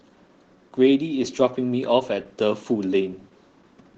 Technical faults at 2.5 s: Opus voice compression

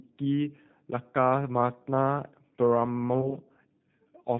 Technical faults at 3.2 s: G.729 codec; VoIP packet loss concealed by the speech codec

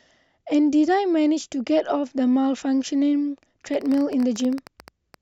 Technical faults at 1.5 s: none

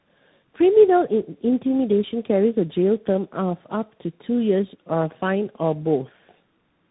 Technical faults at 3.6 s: tandem speech coding

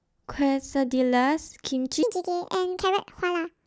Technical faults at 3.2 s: section at the wrong speed

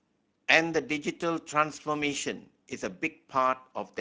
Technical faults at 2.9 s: Speex codec

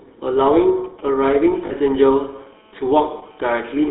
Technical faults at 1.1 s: GSM full-rate codec; GSM signalling bursts

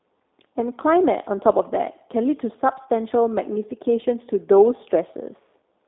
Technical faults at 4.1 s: G.729 codec

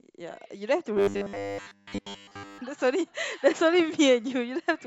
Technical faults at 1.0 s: robotic sound from repeated short buffers

